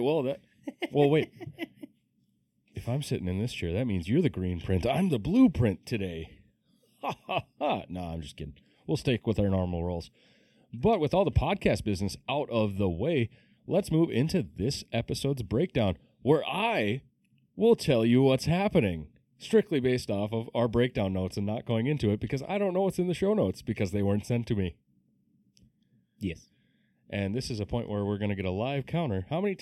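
A speech recording with channel delay (comb filtering) throughout. One channel lags by roughly 0.4 ms before mono summing. Evenly spaced notches, the first near 1.5 kHz, make it hollow and phasey.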